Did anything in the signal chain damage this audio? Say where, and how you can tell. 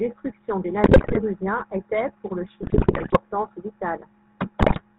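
Yes. The GSM full-rate codec affects the whole clip. This is codec-stage damage. The speech has the buzzy, gravelly roughness this coder produces and nothing above 4 kHz, which fits the 13 kbps full-rate scheme. The coder rebuilds each frame from a vocal-tract filter excited by regularly spaced pulses that keep only every third excitation sample. That coarse pulse grid is what roughens the voice, and the damage is plainly audible throughout.

GSM bit errors occur from 0.84 to 1.18 s, from 2.62 to 3.18 s and from 4.60 to 4.82 s. This is network-stage damage on a weak radio link. In each span the speech turns into squawks, pops and gargling. The cause is corrupted bits reaching the decoder. Wrong filter, pitch or gain parameters bend the spectrum or push the level up frame after frame while the bad patch lasts, and the heavy error rate points to many consecutive frames being hit. The middle span is the longest and has the most frames hit.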